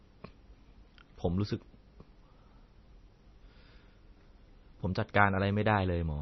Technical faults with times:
0.00-6.21 MP3 compression

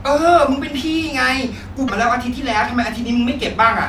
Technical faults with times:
1.84-1.90 damaged data in a compressed stream

